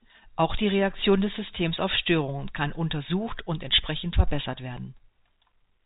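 No faults present; the speech sits in an ordinary G.711 telephone band, with nothing above about 3.8 kHz.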